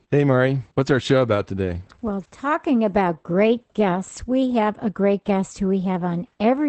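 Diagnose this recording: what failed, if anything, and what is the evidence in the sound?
The failure is at the codec stage: Opus voice compression runs through the whole clip. Energy stops near 8.6 kHz, and codec damage is plainly audible, consistent with SILK-mode wideband coding at about 12 kbps, where linear prediction keeps the speech envelope but codes the excitation coarsely.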